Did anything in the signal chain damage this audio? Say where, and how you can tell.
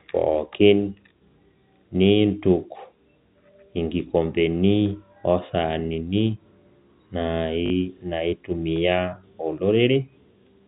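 Yes. At 7.66 to 7.70 s the speech breaks into a brief robotic stutter. This is packet loss with the last packet repeated, a network fault. About 40 ms went missing, which fits two 20 ms packets, and the receiver replayed the last one.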